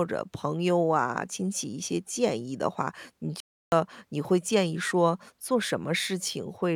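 A speech clip with a playback stall: the player likely ran out of data or was blocked, so the sound cuts to silence from 3.40 to 3.72 s, a 0.32 s gap.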